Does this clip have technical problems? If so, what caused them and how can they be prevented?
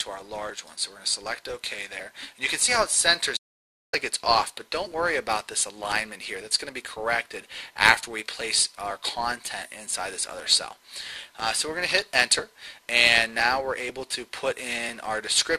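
Yes. Periodic USB or driver dropouts run from 0.50 s to 15.39 s. Every 0.5 s, about a millisecond of sound is skipped, making roughly 30 evenly spaced ticks. A background task is stalling the USB bus or audio driver on a timer. Disabling polling utilities or power management on that port, or using a larger buffer, prevents it.

Damaged data in a compressed stream produces a brief blip at 2.67 s. Corrupted bytes made the decoder misread a frame and resynchronise at the next header. Transferring files with checksums and keeping metadata out of the audio payload prevents it.

An audio dropout to silence runs from 3.37 s to 3.93 s. The sound cuts to silence for about 0.56 s, with no room tone. The likely cause is an input lost or muted while recording continued to write silence. Secure connections and monitoring input levels prevent it.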